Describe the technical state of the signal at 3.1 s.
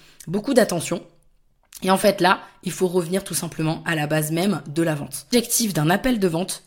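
At 3.1 s the speech signal is intact, with no audible technical fault at that moment.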